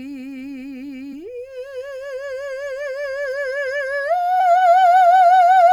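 Damaged data in a compressed stream breaks this music clip at 1.12 s and again from 4.39 to 4.41 s, each a brief glitch where corrupted frames leave the decoder misreading the stream and losing sync until it locks onto the next valid frame header.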